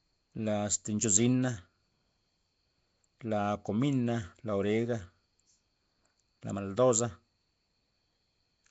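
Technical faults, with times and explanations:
Throughout, Nellymoser compression: the speech carries a rough, hissy halo and a smeared, underwater quality, and nothing survives above 7.7 kHz. The likely cause is Nellymoser Asao coding at a rate that fits about 32 kbps, where each short block gets too few bits, so weaker bands are replaced with noise. A spectrogram shows a hard ceiling at 7.7 kHz and speckled noise filling gaps between harmonics, while the waveform looks blurred.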